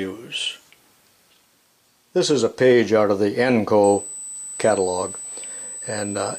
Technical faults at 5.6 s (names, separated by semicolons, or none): USB whine